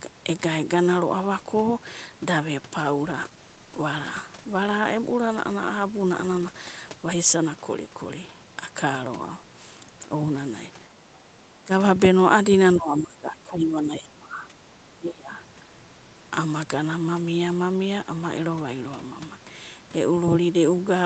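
A call bitrate drop runs from 2.82 s to 7.61 s, with the encoder pushed from 32 kbps down to 15 kbps and held at that floor for about 4.5 s. With fewer than half the bits to spend, the Opus coder has to quantise the speech far more coarsely. The voice turns rough and watery, losing clarity and texture, and it stays degraded until the rate climbs back near the end of that stretch.

Speech suppressed in double talk follows in four episodes: 10.87 to 11.23 s, a brief dip at 11.64 s, a longer stretch from 12.77 to 14.53 s, and 14.94 to 15.35 s. The likely cause is the echo canceller misreading overlapping far-end audio as echo and turning the near talker down. The voice sinks by around 10 to 15 dB in the earlier dips and by roughly 25 dB in the last one, so it sounds as if it ducks away in pieces.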